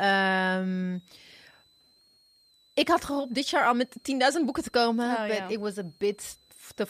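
A switching supply whistle runs under the speech throughout, a thin high tone wandering between about 3.6 and 4.3 kHz, roughly 35 dB below the speech. A power supply cycling at an audible rate leaks it in, drawing a faint drifting horizontal line on a spectrogram.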